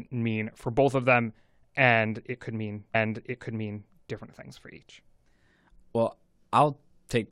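At 2.94 s a stream segment repeated: the player queued the same chunk twice, so about one second of speech replays through 3.94 s after a small blip at the jump back.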